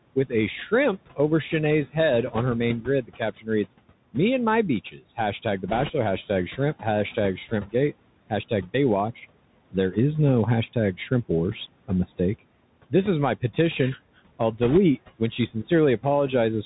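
Throughout, noise suppressor artifacts lower the room noise by about 18 dB between phrases. On a spectrogram, the noise floor pumps and turns patchy from frame to frame.

The Bluetooth CVSD headset codec also runs the whole way. Nothing passes above 4 kHz, and sibilants go scratchy over a granular hiss, which fits a 64 kbps one-bit stream. The spectrogram shows a hard ceiling at 4 kHz.

Speech cut by the noise suppressor occurs at 3.03–3.21 s, 3.37–3.48 s and 4.91–5.01 s. Soft speech is pulled down by about 14, 15 and 11 dB and sounds swallowed. The waveform shows abrupt dips in the envelope.

Bit errors on a Bluetooth voice link hit at 5.68–5.91 s and 14.63–14.78 s. They add a rushing crackle without loud clicks, at an error rate of a few percent. They appear as broadband speckle confined below 4 kHz.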